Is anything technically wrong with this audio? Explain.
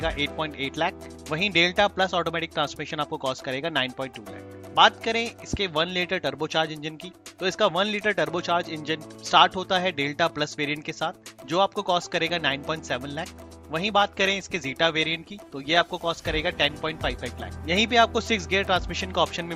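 Yes. From 13.80 to 17.80 s an adaptive stream drops to a lower bitrate, likely from network slowdown, a halving that fits 64 to 32 kbit/s Opus. Artefacts rise abruptly, but unlike a dropout there's no gap.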